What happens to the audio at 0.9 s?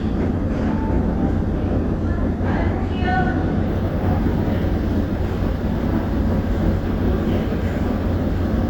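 Nothing goes wrong at 0.9 s; the sound plays through that moment intact, with no dropout, click or distortion.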